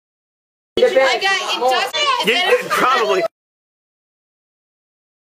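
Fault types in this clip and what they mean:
Damaged data in a compressed stream, at 1.91 to 1.97 s and again at 2.47 to 2.53 s, each event about 60 ms long: part of the encoded data reaching the decoder was wrong at these points, so the decoder could not read those frames correctly, lost its place in the stream and had to search for the next valid frame header. The result is two brief disruptions where the audio stops playing back as intended.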